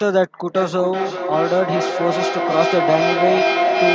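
Feedback echo between two devices runs from 0.55 s to the end of this speech clip, passed through call microphone processing that keeps nothing above 8 kHz. One device replays the other's microphone feed, which is recaptured roughly every 0.4 s, and with repeats reaching about speech level they pile up rather than fading.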